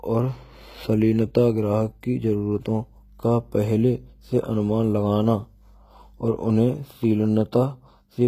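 HE-AAC compression throughout: the treble is likely rebuilt by spectral band replication, leaving bright but metallic, lispy sibilants and nothing above 14.9 kHz, as a roughly 20 kbps stream would.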